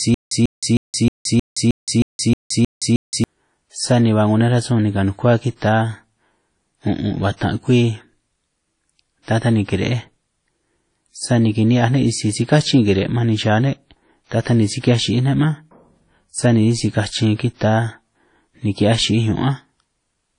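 The speech is already stuttering when the clip begins, and this lasts until about 3.24 s. A 143 ms burst plays, then about 170 ms of digital silence follows. The cycle repeats every 313 ms, ten times in all. This is stutter with silent gaps, likely from a stalled player or stream that replayed its last fragment at each retry and then ran dry. The audio due in those gaps is simply missing.

WMA compression colours the whole recording. The damage is plainly audible. There is nothing above 10.1 kHz, so the top end sounds dull. Quantisation noise smears across long transform blocks, giving a ringing, washy texture. A hiss rises and falls with the level of the speech. The narrow band and plainly audible artefacts point to a low bitrate, likely around 32 kbps.

Pre-echo appears twice. At 7.37 s a sharp attack is preceded by a short hiss lasting about 43 ms. At 14.80 s the same happens over about 37 ms. 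In each case the attack fell late in a codec block. The noise sized for the loud onset was spread across the whole block, including the quiet moment before it. The attacks sound softened and smeared rather than crisp.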